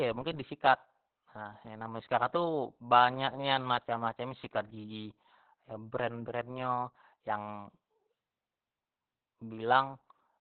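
From start to finish the speech sounds muffled and boxed-in, like an old telephone line, with a hoarse, buzzy edge and a slightly robotic character to the voice. This is Opus voice compression working at a very low rate in its SILK linear-prediction mode. The band is cut back to narrowband, so nothing above about 4 kHz survives, and the excitation is coded so coarsely that the damage is heavy, which fits a bitrate of around 8 kbps.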